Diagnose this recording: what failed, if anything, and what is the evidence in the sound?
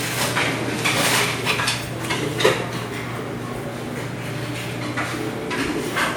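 The codec stage failed through generation loss. Across the whole recording the sound has a swirling, smeared, hollow quality, with blurred attacks. That is more damage than one moderate-rate encode would leave, since the band still reaches 20.1 kHz. The pattern points to a WMA-type codec around 128 kbit/s, likely applied in roughly half a dozen or more successive decode and re-encode passes. Each pass requantises on a shifted frame grid, so noise and spectral holes accumulate.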